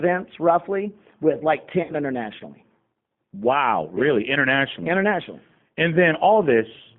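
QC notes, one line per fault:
Throughout: G.729 codec, 8 kbit/s low-bitrate coding limits the line to about 150 Hz to 3.5 kHz, leaving speech plainly rough, thin and synthetic.
1.83–1.95 s: VoIP packet loss concealed by the speech codec, about 60 ms lost just after "roughly with like"; the decoder extends its last frame into a fading smear.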